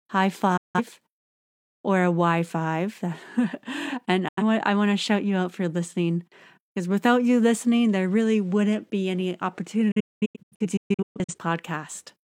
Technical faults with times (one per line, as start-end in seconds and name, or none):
0.57-0.80 digital broadcast dropout
4.28-4.43 digital broadcast dropout
9.91-11.35 digital broadcast dropout